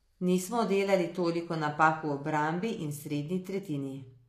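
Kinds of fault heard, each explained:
HE-AAC compression: The speech has plainly audible codec damage, and the likely cause is HE-AAC at a low rate, consistent with roughly 24 kbps. This codec encodes only the lower band and regenerates the treble by copying lower spectral content upward under a coarse envelope. Here the upper range is not genuine, with sibilants taking on a gritty, metallic edge where regenerated harmonics misalign, and nothing remains above 14.9 kHz.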